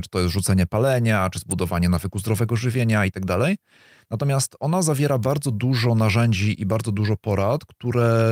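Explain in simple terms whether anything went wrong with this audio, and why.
Two sharp snaps cut into the speech: one at 1.51 s, after "jest rzucenie palenia czy", and one at 5.23 s, after "ona zawiera". Each is an electrical switching spike, likely a nearby switch or static discharge arcing, with the audio line picking up the crackle.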